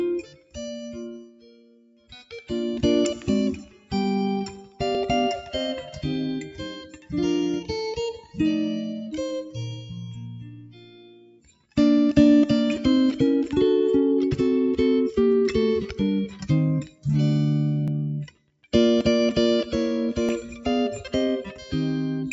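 Throughout, level pumps and held tones and tails thin out, swinging by about 10 dB: a noise suppressor applied to music or sounds is mistaking steady content for noise. The sound cut by the noise suppressor sinks furthest from 0.23 to 2.32 s (about 18 dB down), then again at 3.57–3.91 s and 4.57–4.80 s, as sustained sound is pulled down while onsets pass. At 4.95 s a small forward jump in the sound points to a dropped buffer (overrun), likely about 20 ms lost when samples were overwritten before collection. Further suppressor dips follow at 6.86–7.13, 8.18–8.38, 10.43–11.77 (about 18 dB), 16.85–17.05 and 18.27–18.67 s, while similar skips recur at 17.88, 19.01 and 20.29 s.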